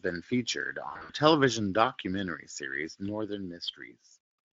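From 0.89 to 1.12 s, just before "television documentary series", VoIP packet loss concealed by the speech codec: about 140 ms of scattered gaps are filled with decaying extrapolated speech.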